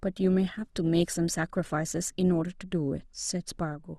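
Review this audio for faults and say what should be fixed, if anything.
From 0 to 2.5 s the speech is dull and smeary, then snaps brighter with no gap. That's an adaptive stream starting at a low bitrate, which fits Opus stepping from 24 to 64 kbit/s. To prevent it, have the player start on a higher rung or buffer briefly before playback.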